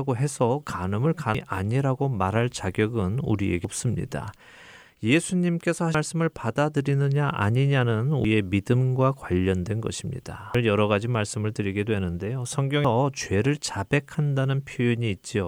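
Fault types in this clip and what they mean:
Audio missing between chunks: joins at 1.35, 3.65, 5.95, 8.25, 10.55 and 12.85 s, each dropping about a fifth of a second, likely lost between 2.5 s recording chunks.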